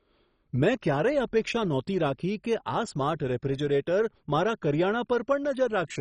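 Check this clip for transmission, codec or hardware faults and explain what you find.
There is one fault, and it runs through the whole speech clip. It sounds like MP2 compression at a low bitrate, likely around 32 kbps, and the damage is heavy. Nothing survives above about 10.4 kHz, so the voice is dull. Starved upper sub-bands drop out and come back, and the bands that remain are coarsely quantised, which gives a gurgling, granular grain. A spectrogram would show a hard ceiling with flickering blocks beneath it.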